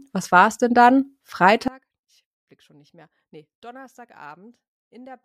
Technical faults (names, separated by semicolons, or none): one channel inverted